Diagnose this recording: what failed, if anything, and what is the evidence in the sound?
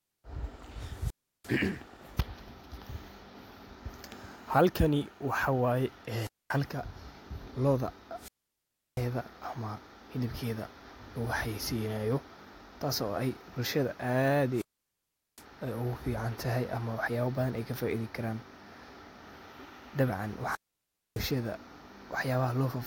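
The analogue wireless radio link, ahead of the receiver output, failed: wireless microphone squelch dropout at 0.87, 6.14, 8.16, 14.52 and 20.45 s. Each time hiss rises as the FM carrier fades, squelch mutes for 0.34, 0.23, 0.69, 0.76 and 0.61 s, and speech returns.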